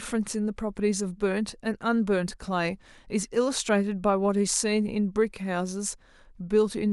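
No technical faults are audible.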